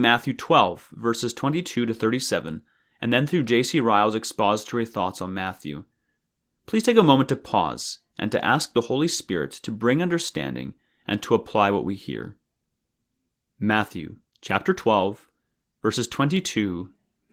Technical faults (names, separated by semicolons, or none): dropped samples